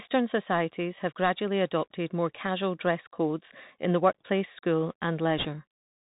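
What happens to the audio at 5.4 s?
A brief rushing crackle runs from 5.38 to 5.46 s, with no sharp clicks: bit errors on a Bluetooth voice link, at roughly one or two percent, each flipped bit's error growing with the speech level before it fades. Underneath, the Bluetooth CVSD headset codec keeps everything below 4 kHz, and its one-bit, 64 kbps adaptive steps leave grainy hiss and scratchy sibilants.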